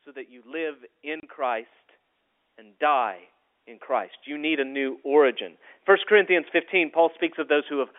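Right from the start, at 0.05 s, there's automatic gain rising: the gain control decides the input is too quiet and nudges its gain up by about 6 dB, finishing around 1.74 s. Because it's turning up the whole signal, the speech and the background noise swell together, so the room seems to creep closer along with the talker rather than the voice simply getting louder.

Partway through that ramp, from 1.20 to 1.23 s, there's packet loss filled with silence. A 30 ms chunk of speech just vanishes and the receiver plays nothing in its place, which fits three lost 10 ms packets. The hole has hard edges on both sides, and the speech feels briefly chopped.

Then the gain control does it again, more strongly, from 2.56 to 5.06 s. This time it raises the level by about 9 dB over roughly two and a half seconds. It's a slow, steady bloom, with the background rising right alongside the voice, and it's bigger and longer than the first ramp. 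All of this sits on a G.711 telephone line, so the sound has that narrow 300 to 3.5 kHz phone-band quality throughout.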